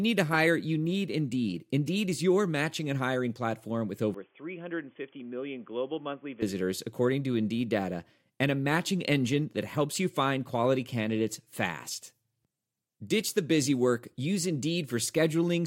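From 4.14 s to 6.42 s, the input likely switched to a poorer device, right after "and hiring platform with", and switched back before "according to". The replacement path passes nothing above 3.4 kHz, so the speech turns abruptly dull and boxy. It also drops by roughly 10 dB and carries its own faint background noise, around 35 dB below the speech. Both changes happen without any silence at the switch, and full clarity returns just as suddenly.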